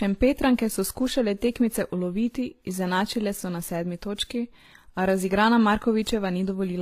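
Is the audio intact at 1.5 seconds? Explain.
No, at 1.5 s, as across the whole clip, the speech has a dull top ending near 14.9 kHz and layered artefacts, likely from transcoding between lossy codecs, a low-rate HE-AAC encode re-compressed by WMA.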